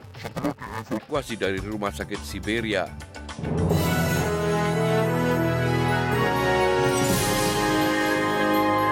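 Interleaved audio read as planar from 0.0 to 1.1 s makes the sound dull and robotic, with a buzz near 345 Hz and no clear octave shift. This fits 128-sample blocks of about 2.9 ms whose alternating left-right samples were split into halves and played as separate channels.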